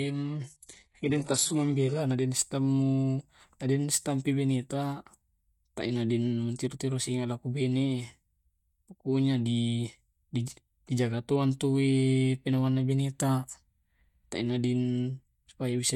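An adaptive stream starting at a low bitrate is behind the fault in this speech clip: the player opened on a heavily compressed version to begin quickly, then stepped up once it had gauged the connection. From 0.0 to 2.0 s the treble sounds synthetic and codec artefacts are thick, which fits a very low-rate HE-AAC stream near 12 kbit/s. At 2.0 s quality jumps abruptly with no gap, to a fuller sound suggesting AAC-LC around 96 kbit/s, with nothing above 11.5 kHz.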